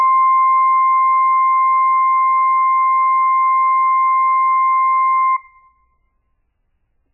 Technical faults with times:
0.00-7.13 MP3 compression

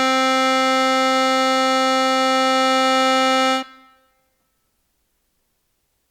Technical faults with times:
none

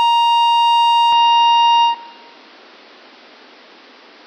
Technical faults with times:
1.12-4.26 input switched to a poorer device

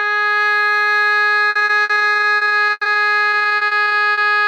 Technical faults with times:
1.49-4.19 repeated packet loss (robotic sound)

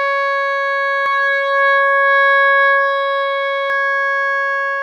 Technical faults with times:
1.06-3.70 doubled audio track

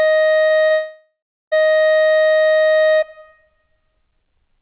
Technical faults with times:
0.46-0.72 short concealed packet loss
0.72-1.53 long network dropout

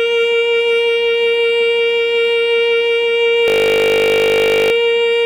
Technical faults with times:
3.48-4.72 system hang loop

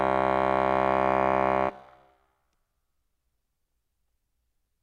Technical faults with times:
none

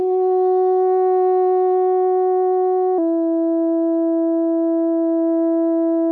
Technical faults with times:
2.98-6.12 section at the wrong speed

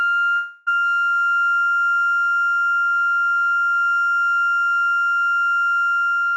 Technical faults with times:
0.35-0.68 long network dropout

